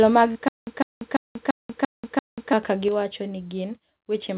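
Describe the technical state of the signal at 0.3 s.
A brief smear, heard as a wobble, runs from 0.32 to 0.37 s. This is short concealed packet loss: about 20 ms of the call arrived too late. The decoder bridged roughly 29 ms by extending the preceding sound, then blended back into the real audio, all within a narrowband call path that carries nothing above 4 kHz.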